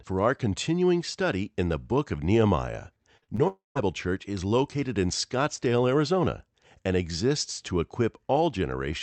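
Around 3.17 to 3.24 s, then 3.24 to 3.30 s and 3.36 to 3.40 s, there's a cluster of short concealed packet loss: about 40 ms of audio missed each of the first two gaps, 20 ms the third, and the decoder papered over them by stretching the preceding sound, so you hear quick smeared, wobbly patches. Right after, from 3.48 to 3.77 s, the sound turns into a fading buzzy continuation and then about 0.16 s of near-silence before it picks up again with roughly 0.28 s gone, which points to a likely long network dropout.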